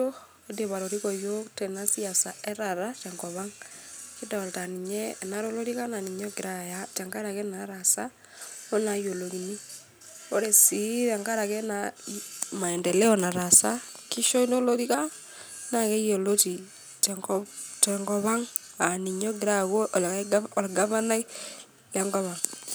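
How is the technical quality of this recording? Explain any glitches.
Nothing in this speech recording needs explaining, since there are no glitches to be heard anywhere in it.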